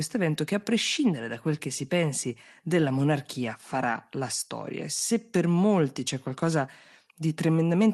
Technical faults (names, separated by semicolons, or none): none